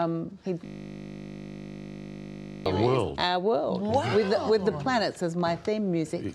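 From 0.66 s to 2.66 s the sound collapses into a steady, flat buzz, pitched at a low 50 Hz hum, before normal audio returns. This is a system hang loop: the computer or its audio driver stalled, and the sound hardware kept replaying the last 20 ms stretch of its ring buffer. That short piece recurs about a hundred times over the two seconds, and because each pass is so brief, the repetition fuses into a tone at the loop rate.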